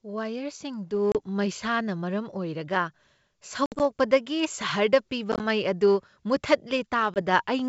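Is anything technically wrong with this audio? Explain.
Yes. There is packet loss on an ADPCM call, heard as short hard-edged dropouts in the speech at 1.12–1.16 s, 3.66–3.82 s, 5.32–5.45 s and 7.14–7.22 s. The first gap comes just before "ꯃꯩꯁꯥꯅ ꯃꯔꯝ", and the third just before "ꯃꯩ ꯑꯗꯨ". The second gap is broken into pieces, losing 80 ms spread over 140 ms. The third loses 50 ms spread over 80 ms. Lost packets are replaced by silence. The decoder's adaptive predictor and step size then drift from the sender's, so the speech returns slightly off-level or rough before settling.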